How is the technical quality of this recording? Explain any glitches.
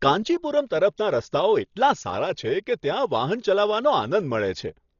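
The recording is heavily compressed, and the damage runs through the whole speech clip.

Dolby Digital compression, throughout: the sound is dull, with nothing above 7 kHz, and a rough, fluttering noise clings to the voiced tones. That likely comes from a starved Dolby Digital encoder, consistent with around 32 kbps, which narrows the band and leaves many frequency lines with no real data, so the decoder fills them with noise.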